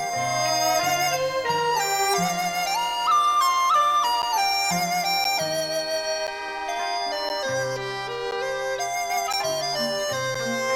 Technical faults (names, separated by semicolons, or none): periodic USB or driver dropouts